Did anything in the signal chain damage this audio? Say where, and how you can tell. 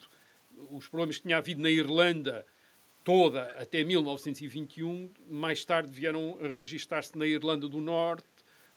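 Yes, two problems from the call path are audible. Between 3.48 and 3.54 s a faint, delayed copy of the speech appears, trailing the original by about 285 ms and sitting roughly 20 dB below it. This is an echo leak, in call processing. The far end was likely on a loudspeaker and its echo canceller let a scrap of our own signal return. The fixed delay and the quieter copy mark it as returned echo rather than room reverberation, which would decay smoothly and not come back as a separate, lagging scrap.

From 6.49 to 6.69 s the speech gives way to a smeared, buzzy continuation of the last sound for about 180 ms. It never falls to full silence, and the speech then resumes further on, with that stretch simply gone. This is a long network dropout, likely packets lost in transit, with the receiver's concealment filling the hole. A short packet-loss glitch would last only tens of milliseconds. Here the fill is long enough to hear as a stretched buzz, and the content is skipped rather than delayed.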